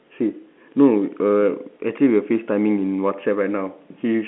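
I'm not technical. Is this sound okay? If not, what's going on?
Yes, this sound is okay, and its narrow, landline-phone quality is simply how a normal phone call sounds.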